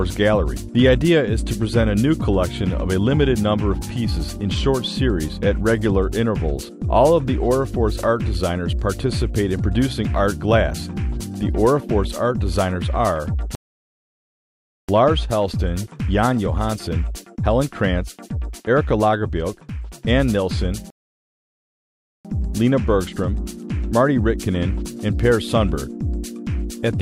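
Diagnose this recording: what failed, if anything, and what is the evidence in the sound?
The streaming player's buffer ran dry twice, a rebuffering stall at the network and playback stage. The sound drops to silence at 13.55 s until 14.89 s, and again at 20.90 s until 22.25 s. Each pause adds about 1.3 s, and playback resumes exactly where it halted, with nothing missing.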